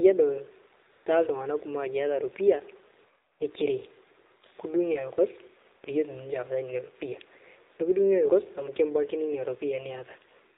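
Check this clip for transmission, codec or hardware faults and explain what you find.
Two faults are present: mobile narrowband coding across the whole recording, and two brief comfort-noise gaps.

AMR narrowband mobile codec, throughout: speech sounds muffled, buzzy and synthetic, with nothing above 4 kHz. The coarse pulse-driven vocal-tract model points to a low mode around 7.4 kbps.

AMR comfort noise, at 0.92 to 1.06 s (140 ms) and 3.32 to 3.40 s (80 ms): the real background switches to smooth, steady synthetic hiss, because speech frames stopped and the receiver filled the pauses.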